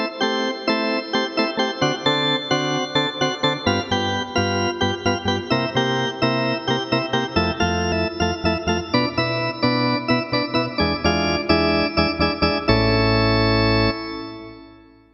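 At 7.92 s there is a very brief blip caused by damaged data in a compressed stream. Part of the encoded data was corrupted, so the decoder misread the affected frame, lost its place in the bitstream and had to resynchronise on the next valid frame header. The glitch lasts only a few milliseconds. On a spectrogram it shows as a thin vertical break, and on the waveform as a short, abrupt discontinuity in the signal.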